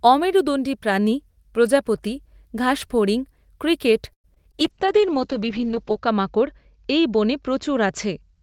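At 4.13 s the speech stalls for about 0.13 s. The last sound is stretched briefly and then there are roughly 80 ms of silence before it picks up exactly where it left off. That's a call audio freeze, most likely packets held up in transit so the jitter buffer ran dry, which inserts a pause rather than losing anything.

Right after, there are two bits of short concealed packet loss, at 4.34 to 4.38 s and 4.52 to 4.55 s. In each, about 20 ms never reached the decoder, and the gap was patched by extending the preceding sound. You hear a quick smear or wobble.

From 4.6 s to the end there's a call bitrate drop from 32 to 8 kbps, with the top end pulled in from 20 kHz to 8 kHz. The speech turns muffled and a bit watery, worst for about 1.4 s at the lowest rate.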